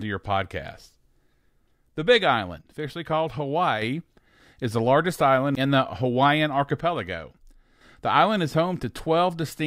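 From 2.61 to 3.82 s and again from 6.81 to 7.81 s, the speech drops abruptly by about 6 dB, then snaps back. This is likely one channel dropping out before the mono sum, not a fade: the level steps rather than ramps.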